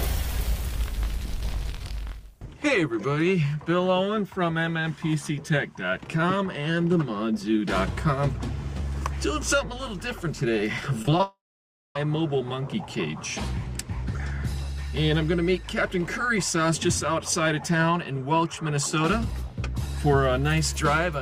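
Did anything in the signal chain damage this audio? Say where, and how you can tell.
Yes. From 11.02 to 11.23 s the sound turns choppy and robotic: repeated packet loss at the network stage, four gaps up to 21 ms each, patched by repeating the last sound.

From 11.23 to 11.96 s the audio stops. A short fading buzz gives way to about 0.57 s of silence, then resumes with the part missing, likely a long network dropout.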